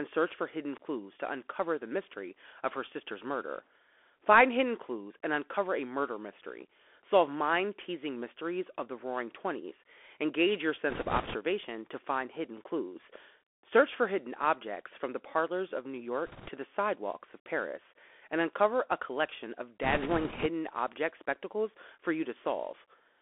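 Throughout, a Bluetooth CVSD headset codec, consistent with 64 kbps CVSD, limits speech to about 300 Hz to 3.4 kHz, leaving scratchy sibilants and granular hiss. Bit errors on the Bluetooth voice link, at a few percent, add rushing crackle from 10.90 to 11.36 s before "to find hidden clues", from 16.26 to 16.48 s before "the sidewalks of", and from 19.83 to 20.47 s between "uncover a collection of" and "object spectacles for".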